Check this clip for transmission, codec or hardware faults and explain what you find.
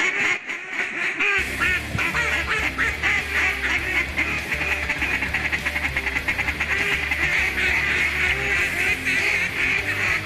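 Three faults are present: codec damage across the whole clip, a brief level drop near the start, and two bursts of reception-type burbling.

MP2 compression affects the entire clip. The top end is dull, and the remaining content has a granular, gurgling roughness, with upper bands audibly dropping in and out. This is likely MPEG Layer II coding at a low rate, consistent with an 80 kbps stream. The bit allocation across its 32 sub-bands is too tight, so high bands are switched off and the remaining bands are coarsely quantised.

A sudden gain jump occurs from 0.37 to 0.79 s. The sound and the background noise drop together by about 7 dB with no fade, then return. The abrupt step at each edge suggests the likely cause is a digital gain change applied in a single sample, with no ramp, followed by a similar step back up.

DAB burbling occurs from 3.30 to 3.72 s and again from 6.24 to 6.34 s. 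In both bursts, short blips of noise appear in single sub-bands over the sound. The mechanism is residual bit errors that get past the error correction, at a rate on the order of a tenth of a percent. They corrupt samples and scale factors inside the MP2 frames, which fits a run of damaged frames in each burst.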